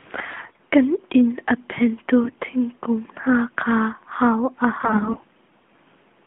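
Speech carried over a narrowband mobile link suffers AMR bit errors three times, at 0.32–0.63 s, at 2.24–2.45 s just after "a phengtu", and at 4.80–5.24 s just after "kha hau an". Weakly protected bits were corrupted, roughly one in ten in the first burst and somewhat fewer later, so excitation pulses and fine gain and spectral values go astray. The voice keeps its rough pitch and level but turns hoarse, scratchy and gargly.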